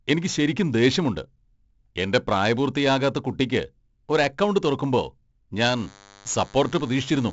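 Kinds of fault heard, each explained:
4-bit ADPCM compression: Each sample is coded as a small 4-bit correction to a predicted value, with the step size adapting as the signal changes. Here the damage is heavy: a coarse, gritty hiss rides on every loud stretch of speech and swells and shrinks with it, and sharp onsets smear. Nothing lies above 7.7 kHz, consistent with a 16 kHz sample rate at 64 kbps. A spectrogram shows broadband noise filling in under the louder regions and a clean ceiling at 7.7 kHz.
DECT cordless phone buzz: A nearby DECT handset or base transmits a radio burst every 10 ms, and the audio circuitry demodulates those bursts into sound. From 5.77 s to the end of the clip, a thin, steady buzz at 100 Hz sits behind the speech at about 25 dB below it. On a spectrogram it appears as evenly spaced horizontal lines at 100 Hz multiples extending well up the range. A zoomed waveform shows a regular spike pattern repeating every 10 ms.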